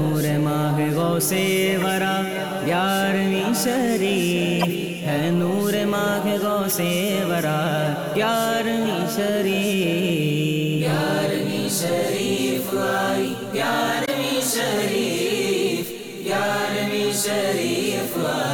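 Short chirpy noise bursts at 1.81, 4.60, 6.69 and 14.04 s are each a corrupt frame decoded: damaged compressed frames got played anyway, throwing energy into the wrong frequencies.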